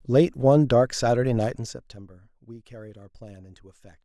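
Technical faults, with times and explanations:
1.43 to 2.05 s, zipper noise: the speech is pulled down by roughly 20 dB, but in discrete 1 dB jumps at around 30 steps per second instead of a continuous glide. Each jump is an abrupt gain discontinuity, so every step leaves a tiny click in the waveform, and the quick succession of clicks merges into a ticking, zipping texture that rides on the speech for as long as the level is moving.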